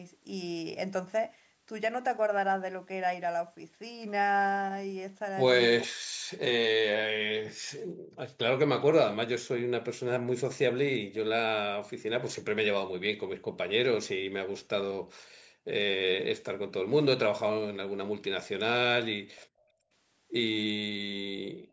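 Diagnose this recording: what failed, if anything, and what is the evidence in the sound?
The failure sits in the call processing stage, where the echo canceller gated the background. The room sound drops by about 40 dB at 5.9–6.3 s, 7.84–8.18 s, 15.21–15.67 s and 19.47–19.91 s, and by about 16 dB at 21.63–21.72 s. Each dip lasts between about 100 and 500 milliseconds and the ambience then returns. The suppressor was clamping the microphone while the loudspeaker played.

An echo leak also comes from call processing. At 19.36–19.46 s a faint, delayed copy of the speech appears, about 30 dB below the voice and trailing it by 416 ms. That fixed, discrete lag sets it apart from room reverberation, which decays continuously from the direct sound. The cause is likely far-end loudspeaker sound that the canceller did not fully remove before sending it back. The gate then closes at 19.47 s, right after the leak.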